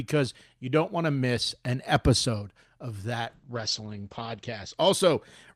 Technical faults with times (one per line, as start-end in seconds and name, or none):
3.29-4.83 call bitrate drop